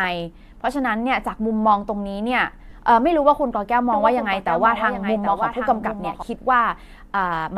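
At 2.70 s the speech briefly turns into a grainy, noisy smear lasting 15 ms. These are lost LE Audio frames: the gap fits two 7.5 ms frames, and the LC3 decoder filled it by repeating the last spectrum with scrambled signs.

From 3.92 s to 6.22 s a dry second copy of the speech trails roughly 0.7 s behind and about 10 dB quieter. It switches on and off abruptly. This doubled audio track likely comes from the same signal captured again by a slower path and mixed in.

Inside that stretch, from 5.80 to 5.83 s, another noisy smear replaces the sound for 22.5 ms. This is consistent with three lost frames concealed the same way.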